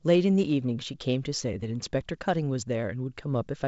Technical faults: none

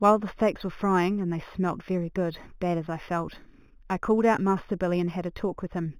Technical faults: imaging from linear upsampling

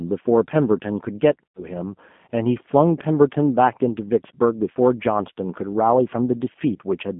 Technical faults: G.729 codec; VoIP packet loss concealed by the speech codec

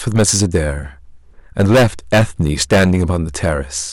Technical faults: hard clipping

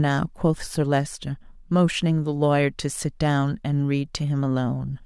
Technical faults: none

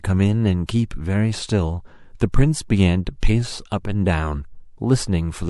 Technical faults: sample clock jitter; pre-echo

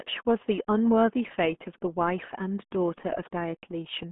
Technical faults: RealAudio 14.4 codec

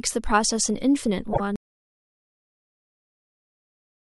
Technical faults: repeated frames; audio dropout to silence

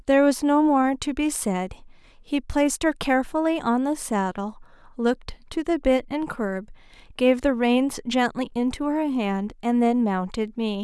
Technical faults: none

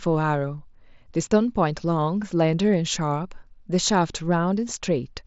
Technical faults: none

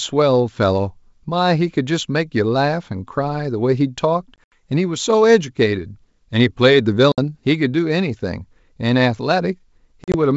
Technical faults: packet loss on an ADPCM call

